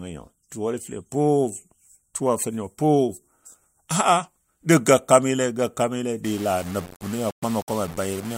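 From 6.24 s to the end at 8.38 s, the speech turns grainy and rough, with gritty distortion that tracks each syllable and noise only about 20 dB below it. This is likely low bit depth without dither: rounding to roughly 6 bits, leaving the error tied to the signal.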